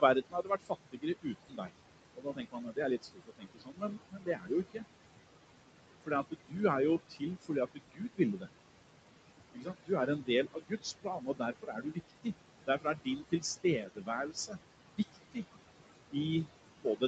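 Throughout, a noise suppressor pulls the steady room noise down by about 21 dB, frame by frame. The background sinks between phrases and rises under them.

From 0.0 to 1.74 s and from 2.15 to 4.85 s, the suppressor mistakes parts of the speech for noise, cutting them by up to about 22 dB. Softer sounds come out swallowed and faint.

Inside that stretch, from 2.40 to 2.73 s, the jitter buffer speeds up to shed held-back audio, trimming roughly 50 ms in short pitch-period pieces. The speech runs at 112% speed with unchanged pitch and sounds briefly hurried.

Later suppressor cuts of speech follow at 6.06 to 6.56 s (about 20 dB), 7.09 to 8.48 s (about 21 dB), 9.53 to 15.44 s (about 21 dB), and from 16.11 s to the end (about 16 dB). Each leaves quieter sounds dulled.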